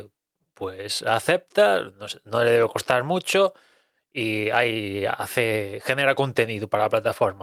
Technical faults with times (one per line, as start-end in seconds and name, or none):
none